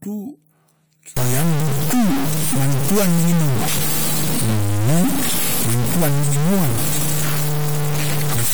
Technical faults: stuck bit

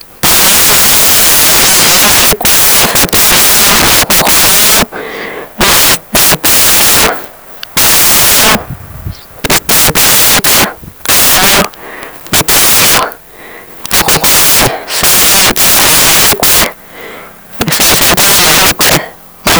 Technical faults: samples built from the wrong bytes

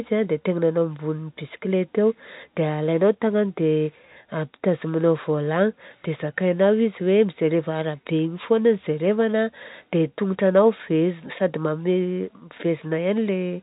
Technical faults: none

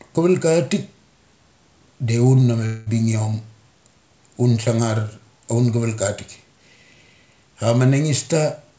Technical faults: long network dropout

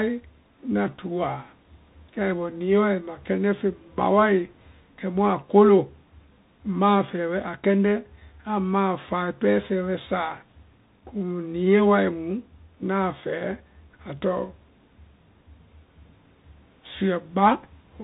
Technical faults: Bluetooth CVSD headset codec

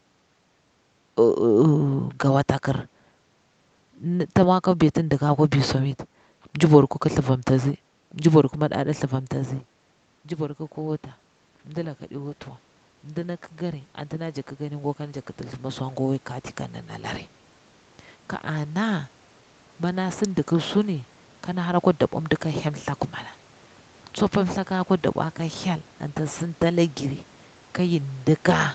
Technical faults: automatic gain rising

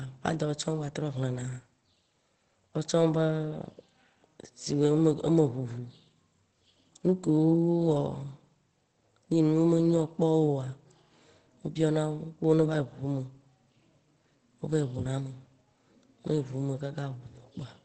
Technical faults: Opus compression

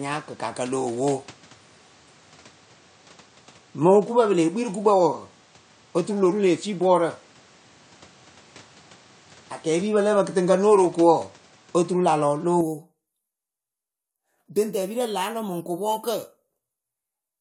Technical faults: input switched to a poorer device

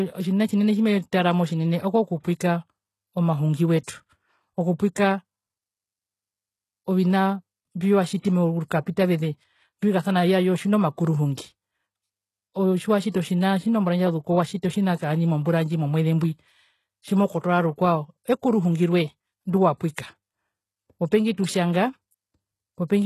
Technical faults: HE-AAC compression; pre-echo

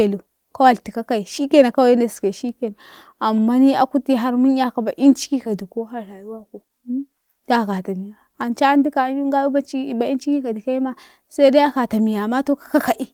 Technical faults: none

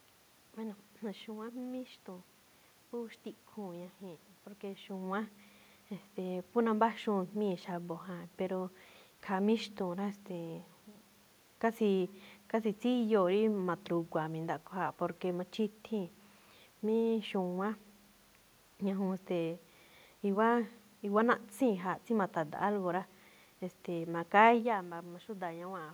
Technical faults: none

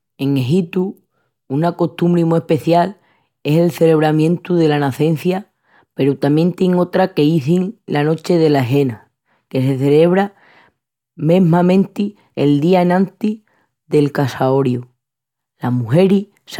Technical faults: none

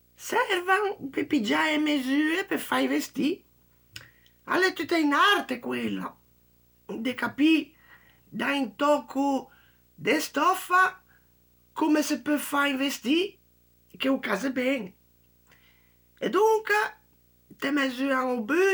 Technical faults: video or display buzz

